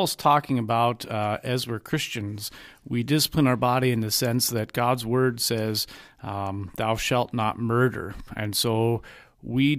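Listening to the speech in the clip, nothing technically wrong stood out at any point.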